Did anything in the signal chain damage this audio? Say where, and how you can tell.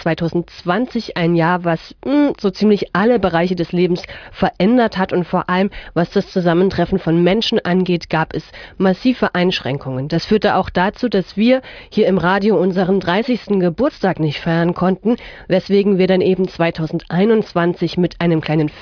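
No, nothing in the chain audibly damaged this audio.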